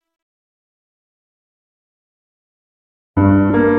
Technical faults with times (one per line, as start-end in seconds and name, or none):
3.49 compressed frames skipped